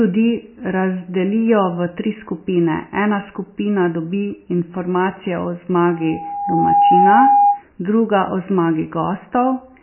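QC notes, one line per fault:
Throughout: MP3 compression, likely. The speech sounds watery and swirly, and nothing is heard above 3 kHz. The damage is heavy. Weak frequency lines drop in and out between frames, which fits a very low bitrate near 17 kbps with a fixed treble cut.
5.88 to 7.63 s: loudspeaker feedback squeal. A single 812 Hz tone swells over about a second to around 10 dB above the speech. The microphone picks up its own loudspeaker. At 812 Hz the loop gain passes one, so the tone feeds itself.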